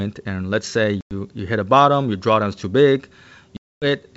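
At 1.01 to 1.14 s and again at 3.57 to 3.86 s the speech drops into hard-edged silence, about 100 ms and then about 250 ms, with the second gap consistent with roughly three times as many lost packets. This is packet loss on an ADPCM call. The missing packets were filled with silence, and the receiving decoder's predictor and step size drifted from the sender's, so the wideband G.722 speech re-enters unsettled before recovering.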